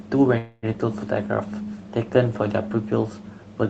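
From 0.37 to 0.66 s the speech stalls into a fading buzzy continuation of the last sound, a call audio freeze, likely from delayed packets draining the jitter buffer. Unlike a dropout, nothing is lost: the speech resumes where it stopped, about 0.25 s later.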